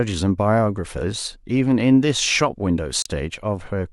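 At 3.02 to 3.06 s the speech briefly mutes in a digital broadcast dropout: the receiver lost a frame, leaving a gap of about 32 ms, consistent with a single lost frame.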